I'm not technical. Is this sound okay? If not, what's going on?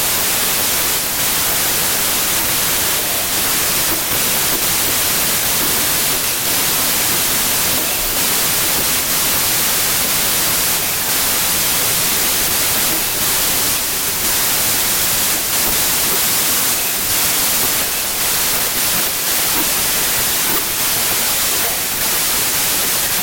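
No. Throughout the clip the speech is buried in loud hiss and plays about 1.33 times too fast and high: a wrong sample width, with 3-byte samples read as 4-byte ones.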